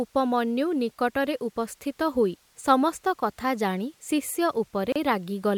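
From 4.92 to 4.96 s, a gap at a join of encoded pieces silences the speech for 33 ms: untrimmed encoder delay and last-frame padding remain between segments. It's a brief dropout, a flat waveform stretch with smeared edges and a blank vertical band on the spectrogram.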